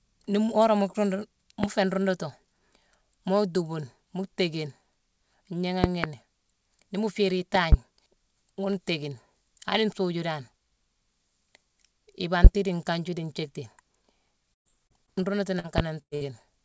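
A recorded speech clip carrying three kinds of technical fault. The first is a loud pop, most likely from a voltage step or pulse, such as a switch, plug, static discharge or driver glitch, entering the signal chain. Each one lands as a sharp pop about 20 to 25 dB above the speech, which continues underneath. Single pops sit at 1.64–1.67 s, just before "féé nruundutu", at 12.44–12.48 s and at 15.78–15.82 s. Double pops occur at 5.84–6.07 s and at 7.55–7.76 s, the second right after "mu féérine".

Near the end the call's packet delivery breaks down, producing a burst of packet loss. Runs of audio arrived too late or not at all, so the receiver stretched the last sound and let it fade into a held buzz or hiss before jumping ahead. About 120 ms goes missing at 14.54–14.67 s, about 100 ms at 16.02–16.13 s and about 60 ms at 16.15–16.23 s.

Shorter dropouts were patched with short concealed packet loss. 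The decoder synthesised a few hundredths of a second from the preceding pitch or noise and blended back in, which leaves brief smears or wobbles. These fall at 14.87–14.92 s, 15.06–15.09 s and 15.59–15.66 s, with roughly 20 to 40 ms lost each time.

The call path itself limits the band to nothing above 8 kHz, which points to a 64 kbps G.722 link.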